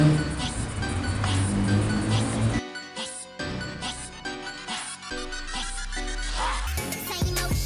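Wrong sample rate from 6.67 s to 7.66 s: the final stretch plays about 1.45 times too fast, raising the pitch by roughly 6.5 semitones, so the sound turns high and hurried. Speed and pitch shift together, which fits audio recorded at 22 kHz being played at 32 kHz without conversion.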